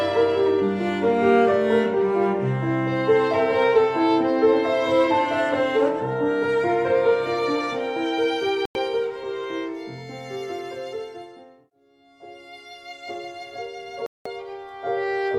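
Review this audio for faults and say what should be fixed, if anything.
There's a digital broadcast dropout at 8.66 to 8.76 s and again at 14.06 to 14.26 s: the receiver mutes on failed frames, losing roughly 0.1 s, then 0.2 s. Better reception, a stronger signal or a better antenna, would stop it.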